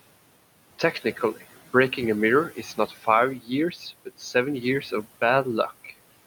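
Noise suppressor artifacts run through the whole recording. The suppressor pulls down what it judges to be steady noise by about 17 dB, band by band and frame by frame. The room noise, about 19 dB below the speech, sinks in the gaps and returns under each phrase.

Speech cut by the noise suppressor occurs five times: 0.79 to 1.42 s, 2.50 to 3.07 s, 3.39 to 3.50 s, 3.71 to 3.84 s, and 4.05 to 4.35 s. In each stretch, quiet parts of the speech were mistaken for noise and dropped by about 8 to 13 dB, over roughly a tenth to a fifth of a second. Soft consonants and word endings there sound swallowed and faint.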